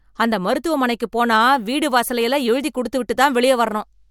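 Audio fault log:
No audible faults anywhere in this speech clip.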